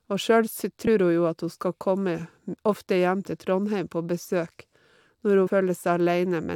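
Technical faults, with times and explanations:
0.86 s and 5.46–5.48 s: compressed frames skipped. At each point the speech lurches forward by about 50 ms, which fits two lost frames of roughly 23 ms each that were missing or rejected by the decoder. There is no silent gap, as a dropout would leave. The audio simply jumps ahead across the join.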